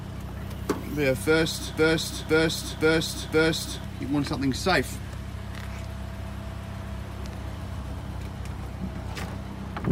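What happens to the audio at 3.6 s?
A stalled stream likely resent its last fragment, causing a broken-record loop from 1.78 to 3.84 s: one 0.52 s piece repeats four times, and the intended audio is lost.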